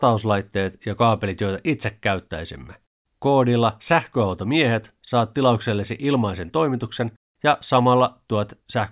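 No dropouts, clicks, distortion or other technical faults are audible anywhere in the clip.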